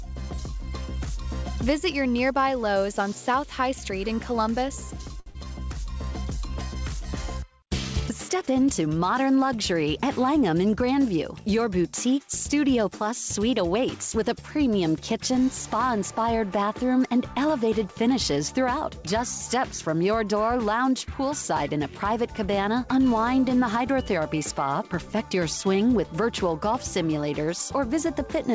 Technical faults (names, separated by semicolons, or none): short stall from a late packet; short concealed packet loss; jitter buffer speed-up